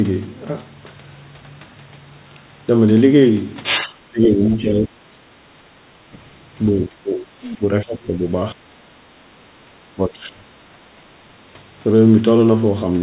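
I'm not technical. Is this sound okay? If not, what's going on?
No, not quite. Between 3.85 and 4.97 s, and again at 5.22–5.26, 6.76–7.65, 7.84–8.12, 8.53–8.58, 9.66–9.70 and 9.95–10.39 s, the talker's speech dips or breaks up. That's likely speech suppressed in double talk: both ends talked at once, so the echo canceller turned everything down.

Around 5.90 to 6.02 s, the room sound briefly drops away for about a tenth of a second. That's background gated by the echo canceller: it heard the loudspeaker playing, clamped the microphone, then let go.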